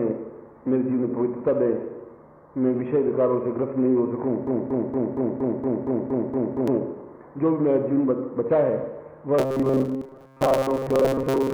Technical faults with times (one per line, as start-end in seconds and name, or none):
4.47-6.68 broken-record loop
9.39-11.53 robotic sound from repeated short buffers